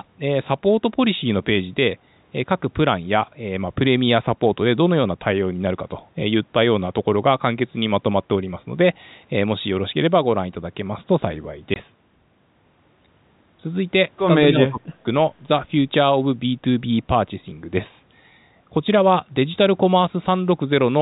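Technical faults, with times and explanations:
11.74–11.76 s, packet loss filled with silence: a hole of 20 ms opens in the speech, consistent with a single lost packet. The receiver put silence in the gap rather than concealing it, so the speech stops dead and restarts with hard edges. Unlike an echo-canceller dip, there is no fade or loss of treble. It is a clean, total dropout whose length matches one packet interval.
14.49–15.05 s, speech suppressed in double talk: across about half a second the talker's level sinks, in places by about 30 dB, for roughly 0.4 s in total. This points to the likely cause, an echo canceller confusing the talker with loudspeaker echo while both sides spoke. The gain reduction separates it from packet loss, and the narrow telephone-band G.711 sound carries on through it.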